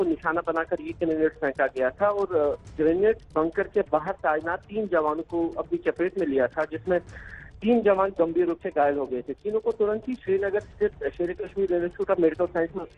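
No technical faults can be heard at any point in the audio.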